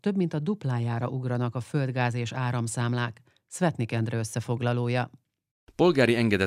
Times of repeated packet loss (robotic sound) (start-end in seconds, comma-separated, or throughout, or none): none